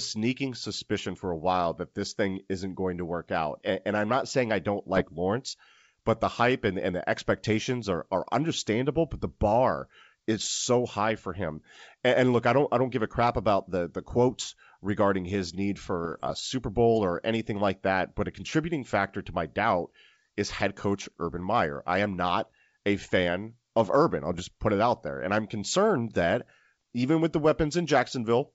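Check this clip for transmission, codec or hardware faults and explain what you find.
Three short bursts of bit errors on an ADPCM link, over a G.722 wideband path at 64 kbit/s whose coding leaves little or no audible damage.

The bursts fall at 4.96–5.09 s, just after "not saying I don't"; 16.05–16.32 s, after "quotes regarding his need"; and 24.31–24.41 s, just before "put it out there". Flipped bits, well under one percent, throw the decoder's step size and predictor off. The result is pops and rough, level-jumping bursts rather than the silent gaps of packet loss.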